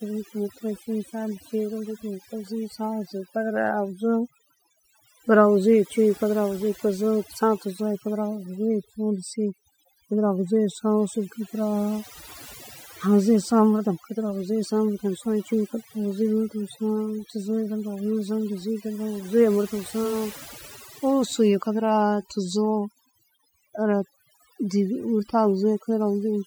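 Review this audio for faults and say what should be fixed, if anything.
The whole recording has overdone noise removal. The denoiser was pushed so hard that bands sitting near its noise estimate get pulled down or switched off, and quieter parts of the speech go with them. The gaps drop and break up into twinkly specks. Next time, back off the reduction amount and check it on the quiet passages before committing.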